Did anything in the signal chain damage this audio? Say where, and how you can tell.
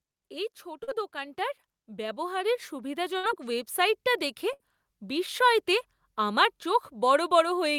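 Yes. Call processing: automatic gain rising from 0.63 to 3.78 s lifts level about 11 dB. The background swells with the voice, so the talker didn't simply get louder.

Network: a short concealed packet loss at 0.83–0.89 s leaves a 40 ms smear where the receiver extended the last sound. It is briefer and blends back more smoothly than the bursts.

Network: a burst of packet loss at 3.17–3.25 s and again at 4.53–4.61 s. Each gives about 60 ms of held, fading sound, then resumes further on. It is filled rather than silent, unlike a plain dropout.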